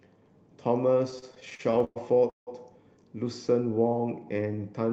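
From 1.11 to 2.49 s the speech has repeated stalls (stutter): packets arrived late, the jitter buffer kept running dry, and fourteen gaps, up to 172 ms, were filled with stretched sound. From 3.75 to 4.64 s a jitter buffer slow-down repeats pitch periods to rebuild reserve, adding 144 ms and slowing playback to 85% without changing pitch.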